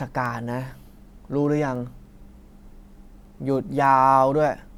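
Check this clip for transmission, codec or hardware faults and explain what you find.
One fault is present, word clock ticks, heard from 0.26 s to 4.75 s throughout the speech. The digital link is being read by a device running on its own clock rather than locked to the sender's. The two clocks differ by something around 70 ppm, so every time they slip past each other a sample is dropped or repeated. The result is a steady series of about 15 sharp ticks, roughly every 0.3 s, varying in strength.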